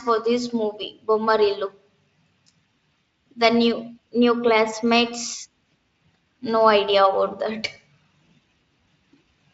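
No technical faults are audible in the speech, and the Speex coding it passes through shows no audible damage.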